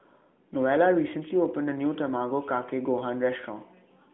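No technical faults are audible in this speech; it comes through a narrowband mobile link whose band runs from about 150 Hz to 3.6 kHz, with the light coding character of an AMR narrowband codec at a rate around 12.2 kbps.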